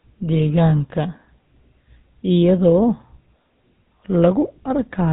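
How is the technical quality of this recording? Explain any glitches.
Quality's held back by a codec problem running through the whole clip. Throughout, it's GSM full-rate codec damage: the voice is rebuilt from a vocal-tract model and a coarse pulse train, which fits a 13 kbps link, so it sounds buzzy and gravelly, with nothing above 3.9 kHz.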